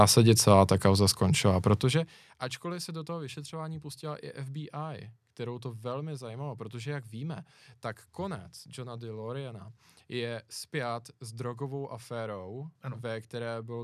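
No technical faults can be heard in this speech recording. The level rises and falls smoothly in places, as if a fader were being moved, and each change eases in without any abrupt step.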